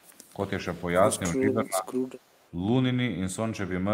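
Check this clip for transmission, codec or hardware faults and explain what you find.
Two kinds of fault appear in this speech clip. An echo leak occurs from 0.0 to 0.33 s and again from 1.98 to 2.51 s: a faint copy of the speech, roughly 35 dB down, trails by 222 ms, likely from incomplete echo cancellation at a loudspeaker end. Speech suppressed in double talk occurs between 1.34 and 1.99 s, for about half a second in all. The talker's level dips by around 20 dB in pieces, likely because the echo canceller attenuated both its own talker and the loudspeaker echo during overlapping speech.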